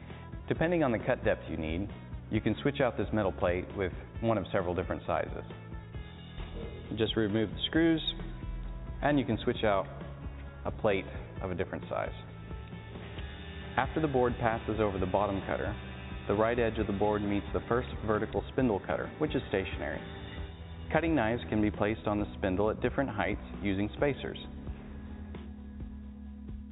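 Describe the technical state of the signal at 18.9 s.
At 18.9 s the audio is intact, with no dropout, glitch or distortion, only the narrow telephone-call band that stops at about 4 kHz.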